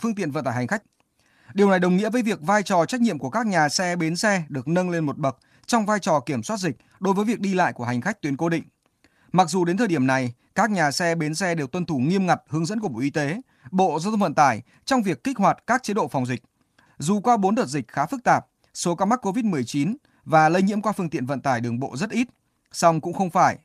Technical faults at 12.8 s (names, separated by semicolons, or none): lost packet rebuilt from error correction